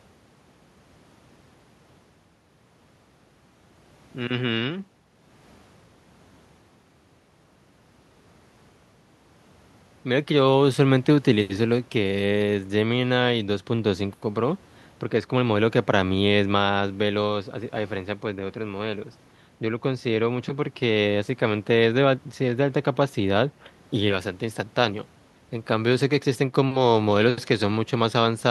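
No technical faults can be heard anywhere in the recording.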